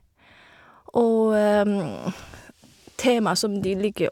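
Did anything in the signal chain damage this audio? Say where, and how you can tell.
No, nothing along the chain seems to have left a mark on this speech; I can't hear any stage that has damaged it.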